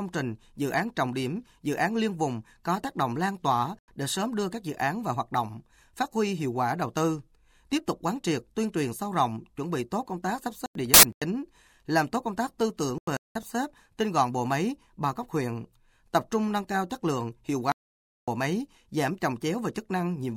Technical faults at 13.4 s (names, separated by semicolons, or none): corrupt frame muted